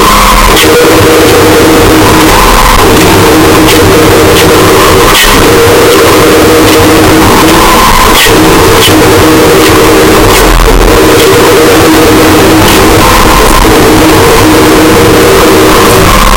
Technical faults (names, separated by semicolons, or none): float read as integer